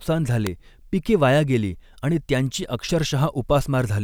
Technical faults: electrical switching spike

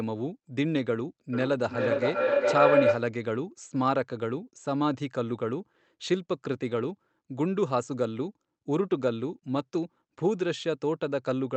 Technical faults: feedback howl

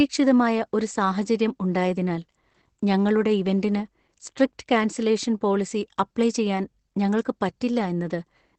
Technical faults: Opus voice compression

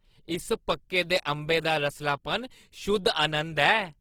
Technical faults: Opus compression

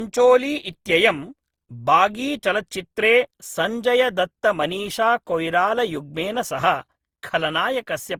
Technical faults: generation loss

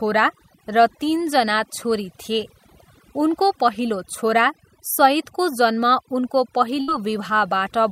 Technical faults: overdone noise removal; burst of packet loss

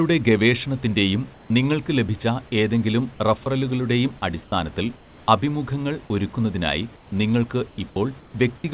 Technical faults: comfort noise in place of the background; sound dropped by the voice detector

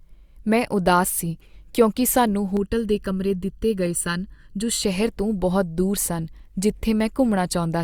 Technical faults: channel delay (comb filtering)

